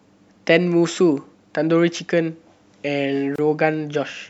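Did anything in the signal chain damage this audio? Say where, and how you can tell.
Yes: a gap at a join of encoded pieces, 3.36–3.38 s, silences the speech for 27 ms, a blank vertical stripe with slightly smeared edges, from untrimmed encoder delay and padding.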